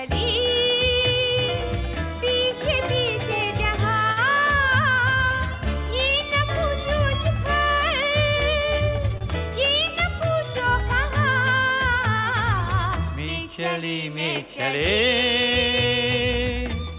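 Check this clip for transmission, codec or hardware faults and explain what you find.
Two faults of one kind are audible. Short stall from a late packet, at 4.12–4.19 s and 9.18–9.23 s: the jitter buffer ran empty, so the last sound was stretched about 46 ms and then 31 ms until the packet arrived. Nothing is lost, but each spot has a brief held tone. The audio passes through a G.711 mu-law call path, with nothing above 4 kHz.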